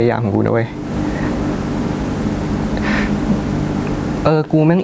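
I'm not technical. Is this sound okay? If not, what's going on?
No. There is gain pumping throughout the clip: the loud and soft parts end up closer in level than they should be. The likely cause is the input level being set far too high, so an automatic limiter keeps yanking the volume down and back up, which squashes the speech.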